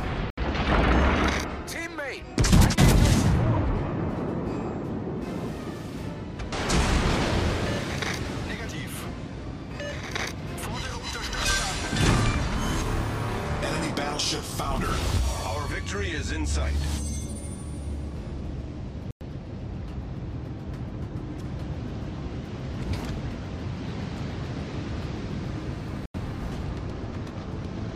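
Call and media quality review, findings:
Three gaps of silence in the sound: 0.30 to 0.38 s (73 ms), 19.11 to 19.21 s (102 ms), and 26.06 to 26.14 s (87 ms). Likely Bluetooth dropout. Late packets were discarded, so the output went silent. Playback resumes further along, as if it had continued.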